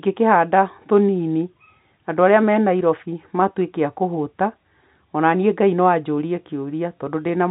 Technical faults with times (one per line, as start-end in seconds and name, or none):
none